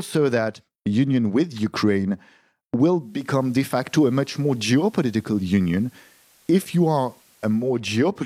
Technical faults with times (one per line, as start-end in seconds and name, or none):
2.94-7.84 digital radio blending to analogue